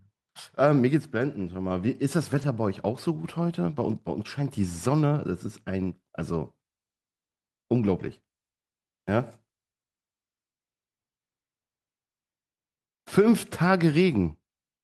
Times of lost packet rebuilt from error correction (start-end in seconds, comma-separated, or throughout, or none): 1.17-1.19, 2.33-2.43, 5.19, 6.19, 7.99-8.09, 13.21